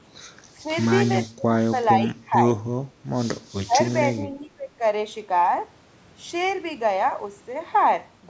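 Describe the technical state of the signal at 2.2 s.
At 2.2 s the speech is being suppressed in double talk. Between 2.01 and 2.35 s the level dips in pieces, about a fifth of a second in all, falling by roughly 15 dB at its deepest. The likely cause is an echo canceller facing both sides talking at once. It cannot tell the near talker from loudspeaker echo, so it turns everything down. The band stays capped at 8 kHz, as call microphone processing leaves it.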